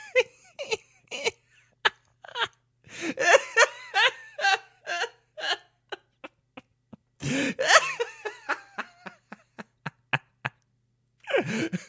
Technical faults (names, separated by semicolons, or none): none